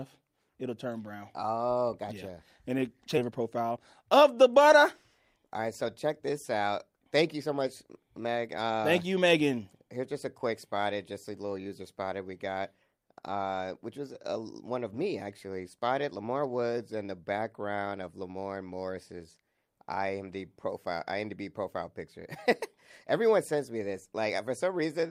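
At 3.17 s the speech jumps abruptly forward with no gap: almost half a second of material is simply missing, and the audio on either side is butted together so a fragment of sound vanishes mid-flow. This is a skip ahead. That stretch never reached playback, either lost in transit or thrown out by an overflowing jitter buffer while later audio was already queued, so the player resumed straight from the newer material.

Right after, from 3.27 to 4.78 s, the speech sounds rushed, running about 10% fast while the pitch stays unchanged. It happens again, more mildly, from 5.36 to 6.27 s at roughly 5% fast. These are jitter buffer speed-ups. The buffer was holding more audio than its target, so the receiver repeatedly cut out tiny pitch-period-sized slices to drain the backlog. That removed around 150 ms in the first stretch and a small amount, around 50 ms, in the second.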